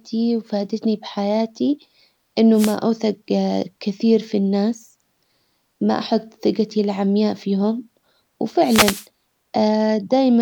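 At 2.54 s a wireless microphone noise hit cuts across the speech. It lasts until 2.77 s, about a quarter of a second. The analogue FM radio link fades as reflected signals cancel at the receiver. Receiver noise then rises over the speech as a short swish of static. A second, longer hit follows from 8.62 s to 9.07 s, close to half a second. It is heard as another burst of hiss.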